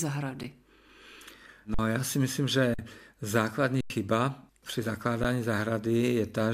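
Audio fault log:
0.43 s, underrun with held sample: an 8.5 ms dropout where the output holds its last value, leaving a flat stretch with about 10 ms of audio lost.
1.74–1.79 s, underrun with held sample: a 46 ms held-flat gap just before "já si myslím", which fits one 2048-sample block at 44.1 kHz going missing.
2.74–2.79 s, underrun with held sample: the same 46 ms hold right after "já si myslím", with about 50 ms skipped.
3.81–3.90 s, underrun with held sample: the longest hold, 93 ms, consistent with two blocks lost and about 100 ms of audio dropped.
5.24 s, underrun with held sample: a 10 ms flat hold with about 10 ms of audio lost.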